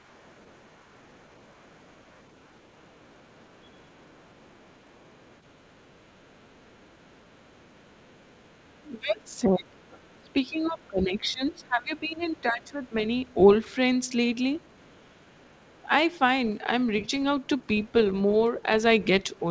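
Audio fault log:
0.0–10.9 s, 11.5–11.6 s, 12.2–13.7 s, 14.5–15.9 s, 17.0–17.9 s and 19.2–19.4 s: other side's voice leaking through. A second, faint voice sits beneath the speech, about 35 dB down in the long opening stretch, about 40 dB down around 11.5 s and 12.2 s, and rising to about 30 dB down near 17 s and 19.2 s. This is likely loudspeaker sound reaching the microphone that the echo canceller failed to remove fully.
9.0–13.0 s: speech suppressed in double talk. The main speech sags while the leaked voice is present, dropping by roughly 20 dB at its deepest, with around three seconds affected in all. This likely happened because the echo canceller could not tell the near talker apart from the loudspeaker echo while both were active, so it turned everything down together. The suppression overlaps the end of the long leakage stretch and the leak at 12.2 s.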